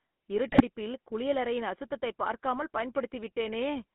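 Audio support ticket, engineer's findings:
GSM full-rate codec, throughout. Buzzy, gravelly roughness on all speech; band limited to about 200 Hz to 3.5 kHz, consistent with a 13 kbps full-rate link. Component: GSM full-rate speech codec. Mechanism: vocal-tract filter excited by sparse regular pulses, so fine excitation detail is lost. Spectrogram: nothing above 3.5 kHz, coarse harmonic smearing. Waveform: grainy texture.

GSM bit errors, 0.48 to 0.61 s, just before "குளியலறையின் அசுத்ததைப் பார்க்காமல்". Squawks, pops and gargling over about 130 ms, which fits roughly six corrupted codec frames. Component: radio link feeding the GSM decoder. Mechanism: flipped bits corrupt filter, pitch and gain parameters, distorting the spectrum and spiking the level. Spectrogram: blocky frame-length smears and bursts. Waveform: abrupt amplitude jumps.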